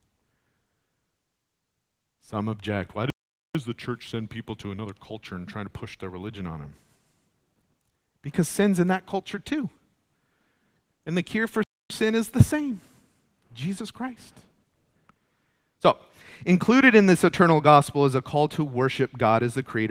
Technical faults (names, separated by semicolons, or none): playback stall